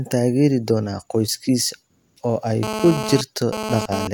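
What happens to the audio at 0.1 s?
Nothing goes wrong at 0.1 s: the speech plays through cleanly, with no dropout, click or distortion at that point.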